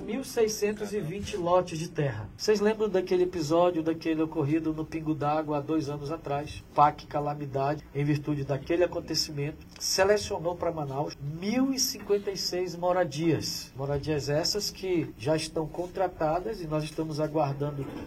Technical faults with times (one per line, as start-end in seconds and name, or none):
none